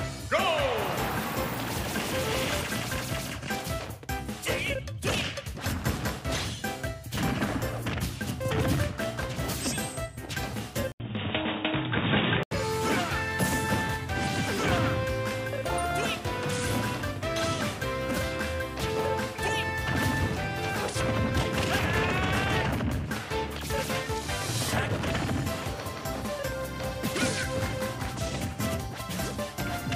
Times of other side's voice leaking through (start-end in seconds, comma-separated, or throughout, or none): none